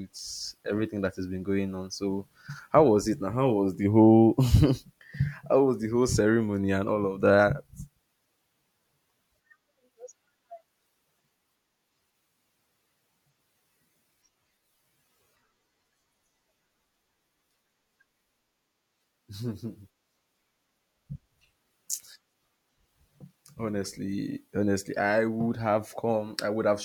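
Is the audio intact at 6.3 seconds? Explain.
Yes, at 6.3 seconds the speech plays through cleanly, with no dropout, click, distortion or other fault to be heard at that point.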